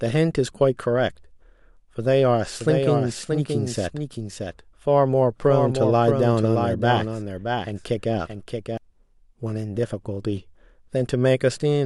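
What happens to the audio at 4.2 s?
At 4.2 s you're inside a doubled audio track running from 2.60 to 8.77 s: a second copy of the speech trails roughly 0.7 s behind, a few dB quieter, with no room tail. It's likely a slower capture path mixed back in, and it cuts in and out abruptly.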